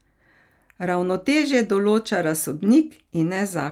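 Nothing faulty is audible here.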